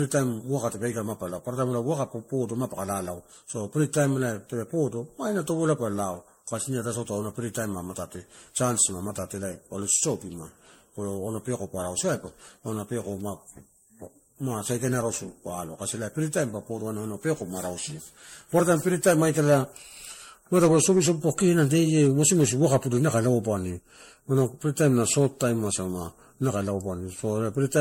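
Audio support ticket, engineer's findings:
Generation loss, throughout: swirly, hollow, smeared speech, blurred attacks, nothing above 16.5 kHz. Likely repeated MP3 decode/re-encode, around seven passes, each requantising on a shifted frame grid so artefacts compound. Band limit fits a 64 kbit/s setting.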